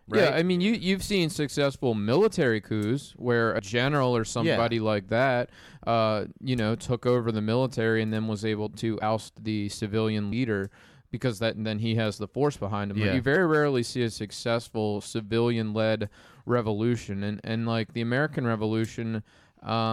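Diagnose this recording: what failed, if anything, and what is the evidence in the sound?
Skips as the speech lurches forward at 3.58, 9.01, 10.31 and 13.35 s: compressed frames skipped by the codec, dropping whole frames of about 23 ms.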